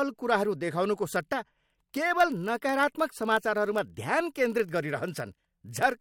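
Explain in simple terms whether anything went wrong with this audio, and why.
From 1.14 s to the end there's a block size mismatch. Each block, probably 1024 samples, gets a tiny gap filled with silence, causing a steady 43 Hz buzz at near-normal speed.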